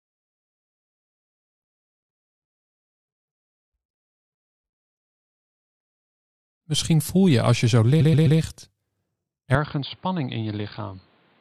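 At 8.00 s you get repeated frames: a 128 ms chunk plays three extra times through 8.38 s, so you hear a quick stutter, and the audio runs 384 ms longer than it should.

From 9.55 s to the end, the input was likely switched to a poorer device. With no gap at the switch, the sound goes dull, with nothing above 4.8 kHz, drops about 10 dB in level, and picks up a new noise floor roughly 35 dB down.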